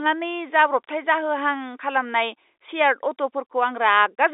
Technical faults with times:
none

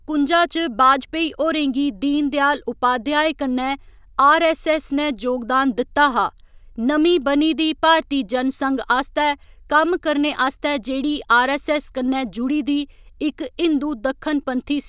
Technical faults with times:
none

